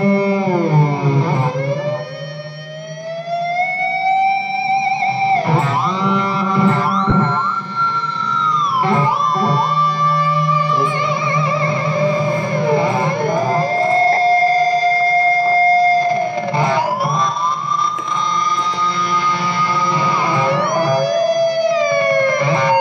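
Two brief dropouts from lost LE Audio frames, at 7.10–7.12 s and 14.13–14.17 s, smear the sound into noise while the LC3 decoder conceals gaps fitting two and four 10 ms frames.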